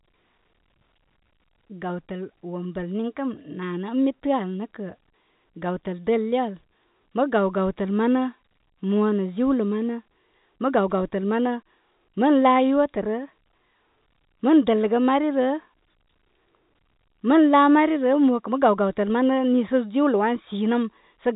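No technical faults can be heard in this speech recording, whose band stops at 3.8 kHz as expected of G.711 telephone coding, with at most the faint, level-following quantisation hiss that format carries.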